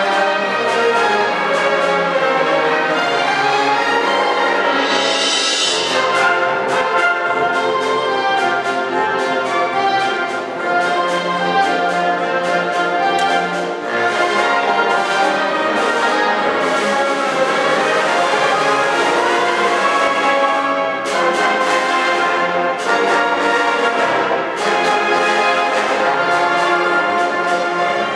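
Nothing in the audio points to a technical fault at any point.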